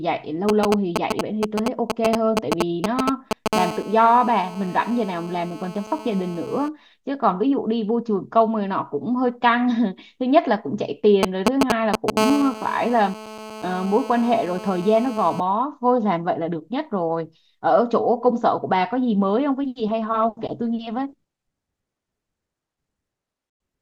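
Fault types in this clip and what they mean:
GSM signalling bursts: A nearby 2G handset exchanging short groups of radio bursts with the network, which the audio circuitry rectifies into audible sound. Here it is a galloping dit-dit-dit pattern of brief 217 Hz buzzes. It runs from 0.49 to 3.48 s at roughly the level of the speech, and from 11.23 to 12.19 s somewhat louder than the speech. Both episodes lead directly into continuous buzz.
GSM phone buzz: A nearby 2G handset transmitting continuously during a call, pulsing 217 times a second, with each radio burst rectified into the audio path. It is a hard, raspy 217 Hz buzz rich in harmonics, steady and unrelated to the speech. It runs from 3.53 to 6.69 s at about 12 dB below the speech, and from 12.19 to 15.40 s at about 9 dB below.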